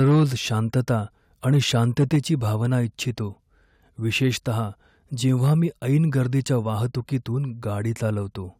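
Harsh, crackling edges break onto the loudest peaks of the speech at 0.00–0.24 s, 0.75–0.91 s, 1.48–2.34 s, 2.72–2.76 s, 4.24–4.28 s and 5.29–5.54 s, just before "मी ऐन गर्दीच्या वाहतुकीतून". This is likely microphone overload. The peaks push up to about 4 dB past the converter's limit and have their tops flattened. The damage is worst in the opening burst, where a large share of the waveform is cut off.

At 2.16 s, partway through the third distorted stretch, voice and background drop together by about 3 dB in a single step. This is likely the microphone volume stepped down, as the call software reacts to the clipping by lowering the input level.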